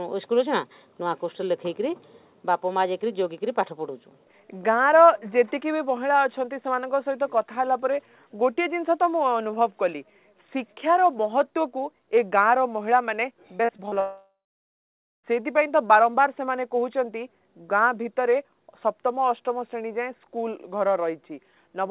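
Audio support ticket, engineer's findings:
Repeated packet loss (robotic sound), 13.58–13.98 s. Choppy stutter: five short holes, longest about 34 ms, each patched by stretching the preceding fragment, so roughly 29% of the span is synthetic fill. Receiver-side concealment/jitter buffer. Differs from the dropout that follows: the gaps are brief and interleaved with real audio, giving a rough, choppy texture rather than a full loss of signal. Narrowband call path audible throughout, nothing above 4 kHz, which fits G.711 mu-law.

Long network dropout, 14.00–15.33 s. Audio cuts out for about 1.2 s. Concealment first extends the last sound as a fading buzz, then about 0.9 s of silence. Playback resumes further along, with the lost portion gone rather than delayed. Likely cause: a sustained network outage rather than isolated packet loss. Tells it apart from the robotic stretch just before it: one continuous hole ending in silence, with no real audio showing through.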